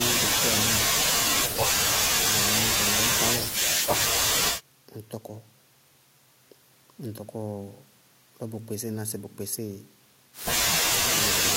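No technical faults can be heard anywhere in the speech recording.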